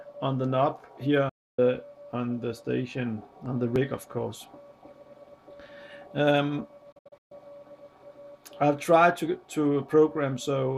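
The audio suffers two digital broadcast dropouts. From 1.29 to 1.59 s it fades to silence within about 8 ms. From 6.92 to 7.32 s it breaks into several short holes, the longest 128 ms. The receiver muted on lost or corrupt frames, so that programme is gone.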